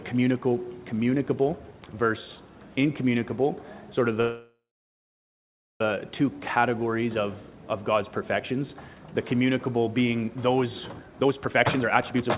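At 4.21 s the sound stops moving forward until 5.81 s. This is a call audio freeze. Delayed packets likely drained the jitter buffer. A fading tail fills the first moments, then about 1.2 s of silence. The audio resumes where it stopped, with nothing lost. Two jitter buffer speed-ups follow. From 7.82 to 8.69 s playback runs 10% faster, trimming roughly a tenth of a second. From 10.96 to 12.37 s it runs 41% faster, cutting about half a second. Pitch holds steady, but both stretches sound hurried. Throughout, nothing lies above 4 kHz, which fits a narrowband G.711 A-law call path.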